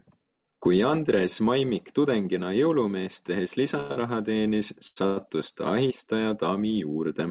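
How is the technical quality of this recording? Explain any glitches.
The recording has four brief timing glitches between 3.8 and 5.2 s, all heard through a narrowband G.711 call path with nothing above 4 kHz.

Short stalls from a late packet occur at 3.80–3.92 s, 3.92–3.98 s and 4.87–4.98 s. Each time, the jitter buffer ran dry and the last sound was stretched for 98, 43 and 91 ms before continuing. They show as smeared, frozen bands on a spectrogram and as a repeating waveform pattern.

A call audio freeze runs from 5.06 to 5.18 s. The sound is held as a fading buzz for about 102 ms, likely because delayed packets emptied the buffer. It shows as a decaying repeated pattern with no true silence.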